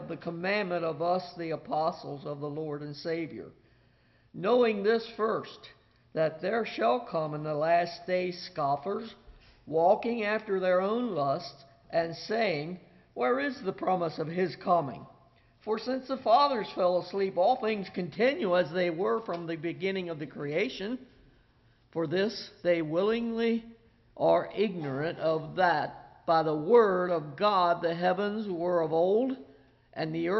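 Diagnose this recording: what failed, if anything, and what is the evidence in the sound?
Nothing failed, and the sound gives no evidence of any fault.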